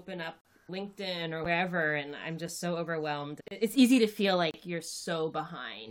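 Time stamps at the joins between one-second stream segments don't line up, so the player pads each mismatch with silence. This produces four gaps between stream segments, hard-edged dropouts at 0.41–0.45 s (about 41 ms), 1.45 s (a brief 8.5 ms tick), 3.48–3.51 s (31 ms) and 4.51–4.54 s (30.5 ms). Each lands roughly on a segment boundary, so the interruptions recur at about one-second spacing, and the material on either side is intact.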